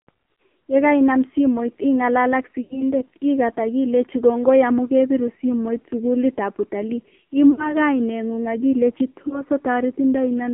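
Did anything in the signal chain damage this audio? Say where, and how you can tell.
Yes. At the codec stage, the AMR narrowband mobile codec is audible throughout: band limited to about 200 Hz to 3.4 kHz, with heavy buzzy, synthetic damage that fits a low mode near 5.9 kbps. Unlike a plain telephone-line filter, it adds vocal-tract-model artefacts, not just lost treble.

Lost AMR speech frames occur on the radio link at 0.34–0.38 s, 2.62–2.84 s (between "simoit ing'alal ak" and "ikat akilechi kongoi amun"), 7.52–7.75 s (after "kebiru simoit sukulitab utalii") and 9.28–9.42 s. The decoder repeats the last pitch and fades it rather than leaving clicks or hard silences.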